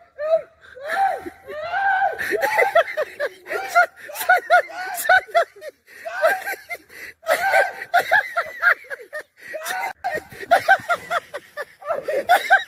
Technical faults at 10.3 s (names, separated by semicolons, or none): none